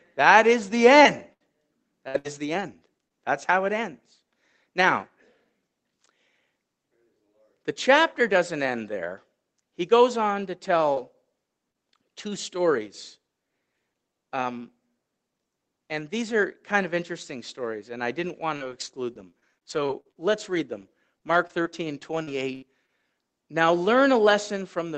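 From 1.03 to 3.12 s there is repeated packet loss (robotic sound). Five gaps, the longest about 74 ms, leave roughly 240 ms of audio missing. The receiver patched each hole by extending the preceding sound, covering about 11% of the span. The result is choppy, with a robotic edge.

At 10.94 to 10.98 s comes a short concealed packet loss. About 20 ms is missing and is bridged with extrapolated sound, which gives a brief smear. Within it, 10.96 to 10.98 s is a lost packet rebuilt from error correction. Opus played a low-bitrate copy carried in the next packet, so there is no gap, only a 20 ms patch that sounds rougher and noisier. The call path's 8 kHz bandwidth, consistent with Opus at around 24 kbps, is unchanged through it.

A second short concealed packet loss at 11.70 to 11.76 s fills about 40 ms with a quick wobble.

From 18.56 to 22.90 s, repeated packet loss returns. Sixteen gaps, the longest about 73 ms, total about 460 ms missing. 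Concealment covers about 10% of the stretch and produces the same robotic chop.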